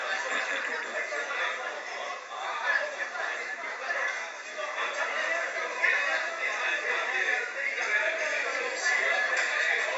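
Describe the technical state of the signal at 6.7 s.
At 6.7 s the signal is intact, with no audible fault or disruption at that moment.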